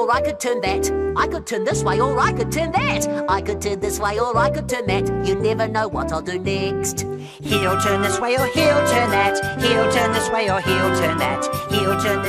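Bluetooth SBC bit pool drop from 1.66 to 4.61 s, and again from 7.99 to 11.51 s. Each time the treble goes dull and a gritty, grainy noise rises, then clears when the rate recovers. The sound points to the sender cutting SBC's bit allocation from about 31 to 15, near 105 kbps, as the link congested: the top sub-bands are starved of bits and the remaining ones are quantised coarsely.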